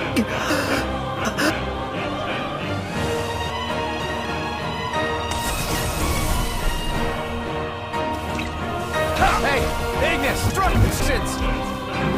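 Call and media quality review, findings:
Chunks out of order: jumbled moments at 0.5–1.5 s, 3.5–4.25 s, 5.5–6.0 s and 10.5–11.0 s. One 250 ms block plays late, by three, two, one and one blocks, each leaving three hard joins. Probably a chunk arriving or written late.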